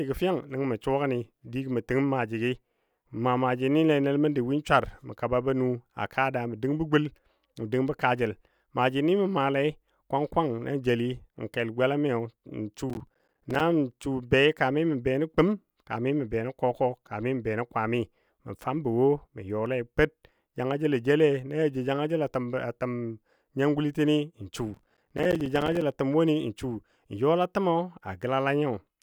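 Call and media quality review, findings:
Processor overload crackle, 12.90–13.61 s and 24.74–25.82 s. Gritty tearing over speech; repeated short dropouts to silence with hard edges, gap length pointing to roughly 5 ms buffers. Audio processing thread missing dozens of deadlines under CPU load.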